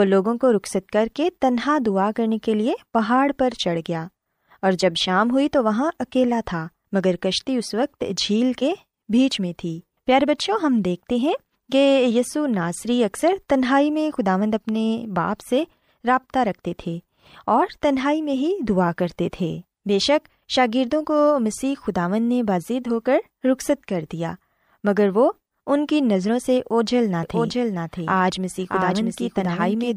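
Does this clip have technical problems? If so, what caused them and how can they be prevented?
Yes. From 27.23 s to the end, the speech repeats as a dry, abrupt copy roughly 0.7 s behind and somewhat quieter, a doubled audio track likely from a second capture path or misaligned edit. To prevent it, route each source through a single capture path and check edits for overlapping duplicate regions.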